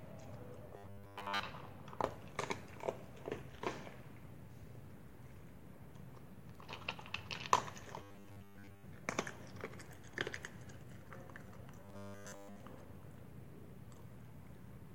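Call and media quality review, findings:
Robotic sound from repeated short buffers at 0.77–1.40 s, 8.01–8.84 s and 11.85–12.60 s: rigid metallic buzz at 100 Hz. Likely jitter-buffer underrun, with the playout path looping a 10 ms segment and replacing most of the real audio.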